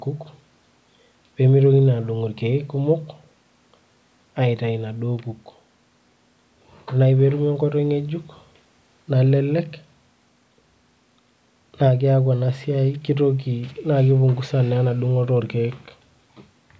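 Nothing stood out on listening to this speech recording, which carries the usual thinning of the lowest bass and the roughly 8 kHz ceiling of call microphone processing.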